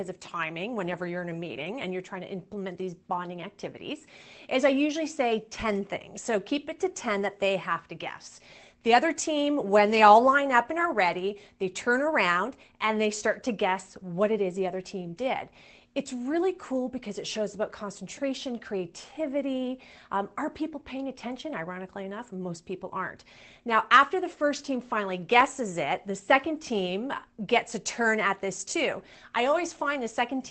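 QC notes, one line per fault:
No faults heard; the call path sounds as expected.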